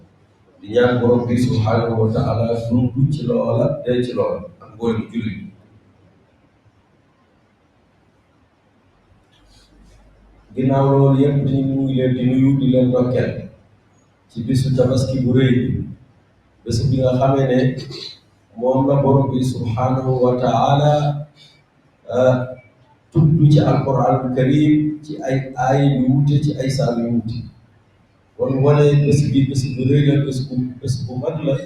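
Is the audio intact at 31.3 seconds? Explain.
No. A speech-tuned noise suppressor applied to music or sounds is running the whole way, mistaking sustained material for noise, so levels pump by roughly 20 dB. From 30.69 s to 31.65 s, there's sound cut by the noise suppressor: it ducks held and decaying parts up to about 15 dB, thinning things out.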